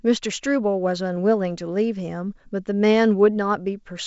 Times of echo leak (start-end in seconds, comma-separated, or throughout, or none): none